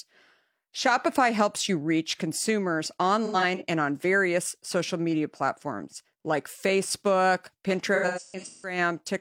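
Between 3.25 and 3.62 s the speech turns briefly smeared and noisy, and again, longer, from 7.94 to 8.78 s. Both are AAC frame loss with concealment, where the decoder replaces missing frames by reusing the last good spectrum. The first gap totals about 0.17 s scattered over 0.34 s, with the longest run near a tenth of a second. The second loses about 0.51 s across 0.68 s, with the longest run around 150 ms.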